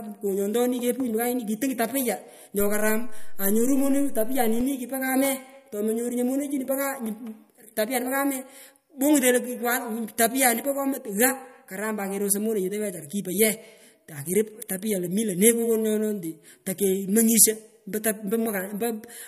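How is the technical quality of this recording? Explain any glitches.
The recording has one glitch. A DC step at 2.60 s shifts the waveform's zero line by about -25 dBFS, as if an offset input were switched in, and it holds until 4.61 s before stepping back. Each jump is a low thump or click, while the speech carries on unchanged.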